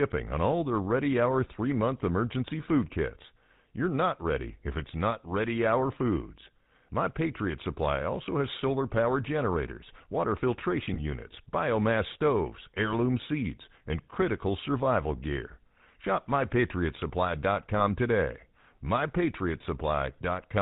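Speech passed through the GSM full-rate codec, whose pulse-driven vocal-tract model at 13 kbps cuts everything above 4 kHz and leaves a buzzy, gravelly roughness throughout. Lost GSM frames, each sounding like a single dropped 20 ms frame, were bridged by repeating the last good frame, giving brief metallic rings at 10.94–11.0 s, between "solar power generators water" and "units biomass stoves heirloom", and at 17.78–17.87 s.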